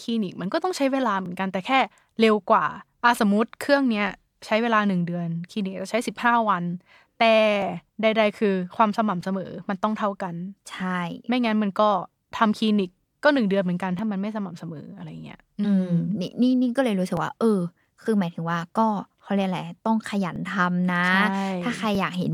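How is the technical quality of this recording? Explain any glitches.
The recording has one recurring fault. From 1.26 s to 21.95 s, regular clicks occur every 1.59 s in the speech. These are clock drift buffer slips, likely from a clock mismatch of roughly 0.1% that drops or repeats roughly 70 samples.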